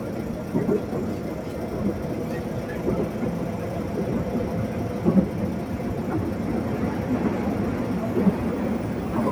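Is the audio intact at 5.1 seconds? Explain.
Yes, at 5.1 seconds the sound plays through cleanly, with no dropout, click, distortion or other fault at that point.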